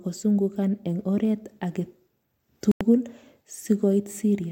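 At 2.72 s the speech drops to dead silence for about 92 ms, then carries on at 2.81 s. That's a Bluetooth stall. Most likely interference delayed packets, the headphone buffer emptied, and playback just waited until the resent data showed up.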